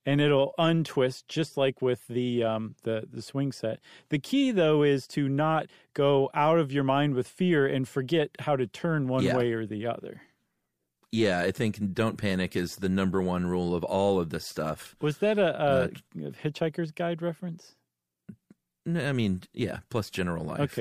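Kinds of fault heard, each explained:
Listening through the speech recording, nothing stood out as a technical fault.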